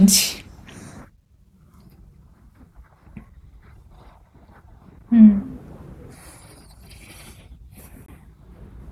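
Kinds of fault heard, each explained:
CD skip: the laser jumps to a different turn of the disc's spiral, so the player briefly mutes and resumes from another point. Here a tick and brief mute at 3.29 s, then a roughly 20 ms mute at 8.06 to 8.08 s; waveform shows flat gaps, spectrogram thin vertical clicks with discontinuous content either side.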